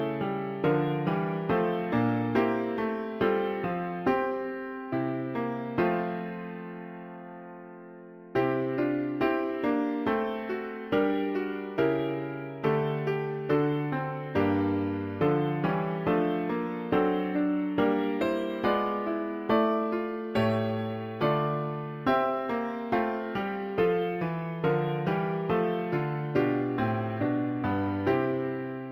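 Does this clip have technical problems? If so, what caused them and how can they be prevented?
Yes. Throughout the clip the top of the band sounds dulled, and a faint metallic shimmer rides on hissy, bright sounds, roughly 45 dB below the main signal. This is imaging from linear upsampling. The sound points to a 16 kHz original raised to 44.1 kHz by drawing straight lines between samples, which leaves mirror copies of the spectrum in the 8 to 16 kHz range. To prevent it, resample with a proper band-limited interpolation filter that has a steep low-pass cut-off.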